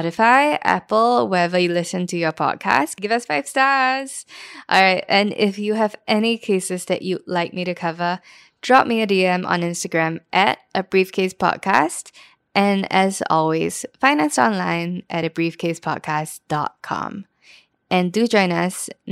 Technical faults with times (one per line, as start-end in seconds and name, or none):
none